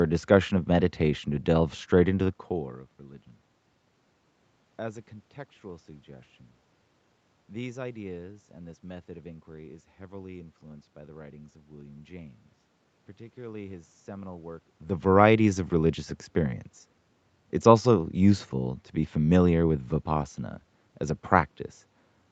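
A speech recording, and nothing is technically wrong with it.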